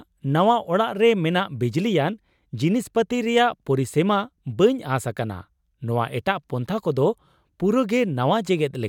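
No technical faults can be heard anywhere in this speech recording. There is nothing here that calls for a timestamp or a description.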